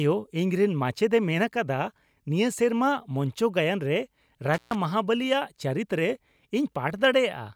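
At 4.54 s the speech cuts out in an intermittent contact fault, with the disturbance running to about 4.75 s. A loose cable or plug briefly lost its connection, breaking the signal path for roughly 133 ms. The dropout is framed by crackle as the contact scrapes open and then closes again, and during the gap the audio falls away to a faint hiss before the speech returns abruptly.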